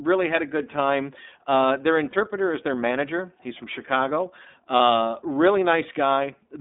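From start to finish, the speech passes through the iLBC codec. The band runs from about 200 Hz to 3.6 kHz, so the top end is gone. Each frame is coded on its own, and the damage is plainly audible. The voice sounds a little rough and synthetic. That texture fits the 13.33 kbps mode with 30 ms frames.

From 2.1 to 2.14 s, just before "is their manager", there are lost iLBC frames. One frame is missing, about 30 ms of sound. The decoder fills the gap by repeating the last pitch cycle with noise mixed in. It sounds like a brief, held, slightly buzzy vowel. The same thing happens from 4.77 to 4.8 s, again one frame. Each time the voice recovers at once, because the next frame decodes without needing the lost one.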